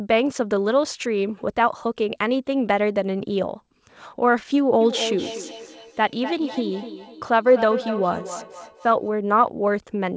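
From 4.81 s to 9.12 s the speech comes round again at a steady interval of roughly 300 ms. Each repeat sounds thinner and more ringing than the last, and the loudest sits about 10 dB below the direct speech. This is feedback echo between two devices: a second device in the same room plays the call back, its microphone recaptures it, and neither echo canceller removes sound from the other device. The repeats keep the call path's 8 kHz band limit.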